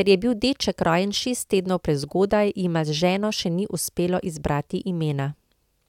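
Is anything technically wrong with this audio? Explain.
No, nothing is technically wrong with this speech clip. There is no audible sign of trouble from the recording, processing or playback chain.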